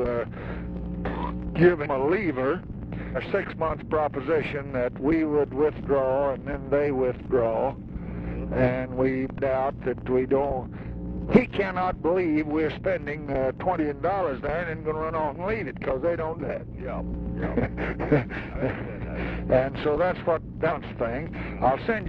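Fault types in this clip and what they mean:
Compressed frames skipped: six times, runs of whole 46.4 ms frames go missing and the sound jumps ahead.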